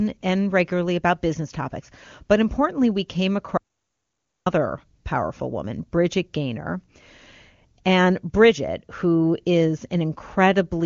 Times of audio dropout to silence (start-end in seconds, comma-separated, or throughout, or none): 3.57-4.46